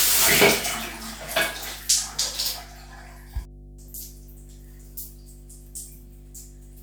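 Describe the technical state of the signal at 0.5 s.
At 0.5 s, as everywhere in the clip, mains hum sits under the sound: power-line current leaking in through a ground loop or nearby transformer adds a steady 50 Hz tone roughly 20 dB below the signal. A spectrogram shows an unbroken horizontal line at 50 Hz.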